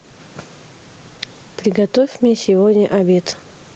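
A short speech clip with gain pumping running right through it. The gain swings up and down by around 10 dB. The likely cause is input gain set far too hot for the mic, with a fast compressor or limiter clamping down on every peak. That also squeezes the loud and quiet parts together, so the whole thing sounds flattened and squashed.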